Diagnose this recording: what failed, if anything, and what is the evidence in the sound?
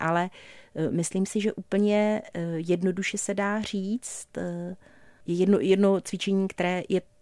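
Nothing failed here as far as I can hear: the speech runs along steadily, and no stage in the chain gives itself away.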